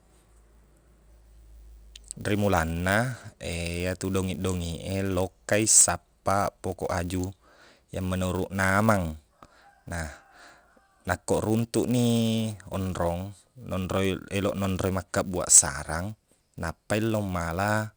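Filter restarted on every block, heard throughout the speech: a filter in the chain clears its memory at each block boundary and begins every block from silence, so each one opens with a small transient. Those repeated transients fuse into a buzz at about 200 Hz, which points to blocks of 5 ms. The buzz rides on the speech and rises and falls with its level, growing louder on stronger syllables and fading in the quieter stretches.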